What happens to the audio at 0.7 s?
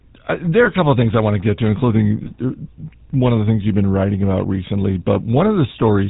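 A lost GSM frame falls at about 0.64 to 0.68 s, just after "uh there are" and before "a couple of things". About 20 ms of data is missing, which fits a single dropped frame. The decoder fills the gap by reusing the last good frame's settings, so the sound briefly turns into a rough, metallic ring. This sits within the buzzy, gravelly roughness of the GSM full-rate codec, which at 13 kbps plainly colours the whole clip and cuts everything above 4 kHz.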